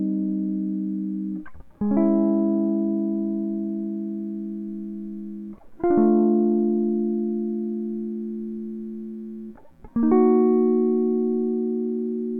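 No technical faults can be heard anywhere in the music.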